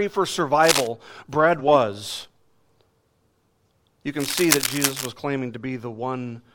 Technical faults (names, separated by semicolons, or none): cable scratch noise; compressed frames skipped; processor overload crackle